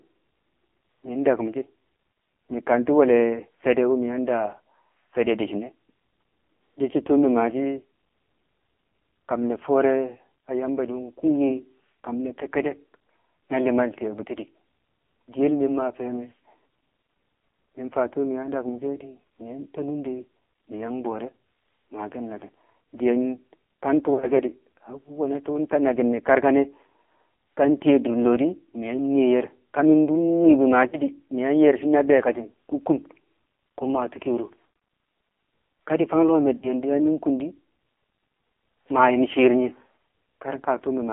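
The whole recording runs through an AMR narrowband mobile codec, passing only 250 Hz to 3.5 kHz. Its heavy, buzzy, synthetic texture fits the low 5.9 kbps mode. Lost AMR speech frames cause smeared, fading warbles at 24.14–24.43, 30.88–30.99, 34.66–34.90 (the longest dropout), and 36.58–36.75 s, between "di̱ fang lo̱o̱ me̱" and "na kung di̱".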